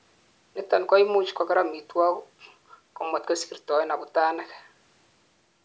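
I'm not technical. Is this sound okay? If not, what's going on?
Yes, this speech clip has no faults; the thinner low end comes from the call's microphone processing trimming the deepest bass, which is normal.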